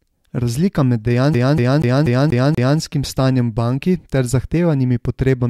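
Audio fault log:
1.34 to 2.79 s, CD stuck on one turn: The speech locks into a fast, even stutter. The same 0.24 s of audio plays six times in a row. Each jump back is marked by a brief mute. A scratch on the disc sends the laser back one track at the same point on every rotation. So the player keeps rereading that short stretch instead of moving on. The regular repeat rate gives the familiar sound of a skipping CD.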